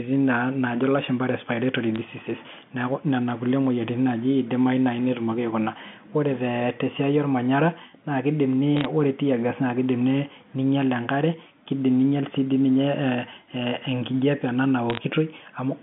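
Sharp ticks and brief crackle at 1.96 s, just after "naa naajo lashumba respiratory", at 8.77 to 8.85 s before "ore tear gas", and at 14.90 to 14.99 s: bit errors on a digital phone line, where flipped bits corrupt individual samples.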